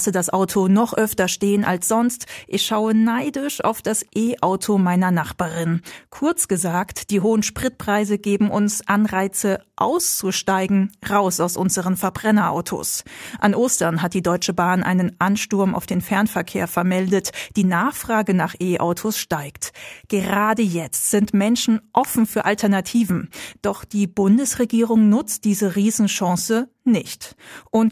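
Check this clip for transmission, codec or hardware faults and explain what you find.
No faults detected here.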